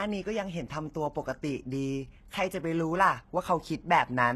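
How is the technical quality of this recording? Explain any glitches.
The recording is compromised by a single fault that runs throughout.

Low-bitrate audio saved at a high bitrate, throughout: the speech has nothing above 12.3 kHz and carries the artefacts of the first encoding. The likely cause is a very low-bitrate encode, consistent with something like 16 kbit/s HE-AAC, later re-saved as high-bitrate MP3, which enlarges the file but cannot restore the detail the first codec discarded.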